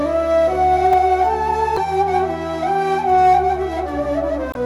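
At 0.93 s there is a brief jumbled moment where chunks are out of order. A short block of audio, consistent with a chunk of about 5.3 ms, plays one position late, after the block that should follow it. Nothing is missing, but the swapped order leaves hard joins that produce a short garbled moment.

From 1.74 to 1.78 s and again from 4.51 to 4.57 s there are short glitches caused by damaged data in a compressed stream. Corrupted bytes make the decoder misread those frames and lose sync until it locks onto a valid frame header, producing roughly 45 to 55 ms of disruption.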